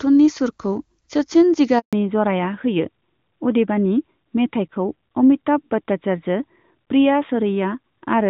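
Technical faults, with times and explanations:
1.79 to 1.93 s, handover gap: the speech cuts out abruptly and stays silent for about 140 ms while the call is passed from one network link to another. No speech frames arrive during the switch, so whatever was said in that window is simply missing.
1.93 s to the end, fallback to narrowband: once the new link starts, nothing above 4 kHz remains and the voice turns duller and rougher. The call has dropped from wideband HD Voice, which before the gap sounded clean and fits AMR-WB at a high rate such as 23.85 kbit/s, to an older narrowband codec, consistent with AMR-NB at 12.2 kbit/s.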